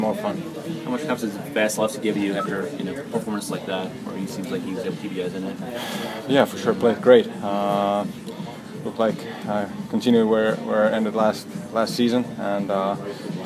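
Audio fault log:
No faults found in the clip.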